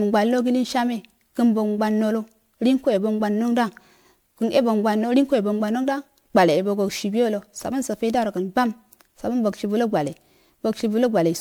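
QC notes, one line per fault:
Throughout, generation loss: the speech has a swirly, watery smear with a hollow, scooped-out quality, and consonant attacks come out soft and blurred, more than a single MP3 pass would give. Likely cause: the audio was decoded and re-encoded around five times in a chain that fits 128 kbit/s MP3, each pass quantising on a shifted frame grid so the noise and spectral holes stack up. Top end stops near 20.9 kHz.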